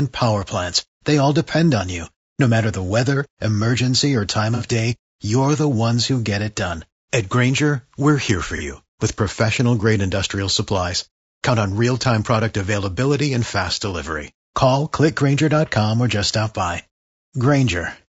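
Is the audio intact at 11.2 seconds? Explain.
No. At 11.2 s the speech sounds rough and grainy, with noise between harmonics. This runs throughout. It likely comes from low-delay AAC compression, which fits a low bitrate of about 32 kbps.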